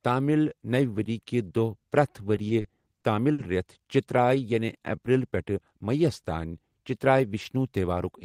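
From 2.35 to 3.41 s, right after "کہِ دۄہ پرٛٮ۪تھ", the speech shows repeated stalls (stutter). Packets arrived late five times, and each time the receiver stretched the last sound to fill the wait, 130 ms in all, the longest 50 ms, with nothing lost. It drags and hiccups. A spectrogram shows brief frozen, flat harmonic patches, and the waveform shows repeated cycles.

From 4.21 to 4.97 s, a jitter buffer slow-down plays the speech at about 92% speed with the pitch unchanged. The receiver repeated single pitch periods to rebuild its reserve, adding 71 ms, so sounds are drawn out. The waveform shows duplicated periods, and on a spectrogram the formant tracks look lengthened.

From 7.09 to 7.65 s, a jitter buffer speed-up runs the speech at about 109% speed at the same pitch. The receiver cut out short pitch-period pieces totalling about 50 ms to reduce its excess delay, so the speech sounds hurried. 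The waveform shows trimmed cycles, and on a spectrogram the formant transitions look compressed.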